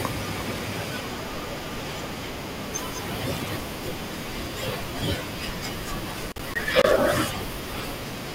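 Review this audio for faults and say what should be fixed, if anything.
Loose connector crackle at 0.54 to 0.91 s, 3.35 to 3.62 s and 6.12 to 6.96 s: a worn or dirty contact in the cable path keeps making and breaking as it shifts, chopping the speech into irregular scratchy bursts. The longest burst runs about 0.84 s. To prevent it, clean or replace the suspect connector and strain-relieve the cable so it cannot move at the joint.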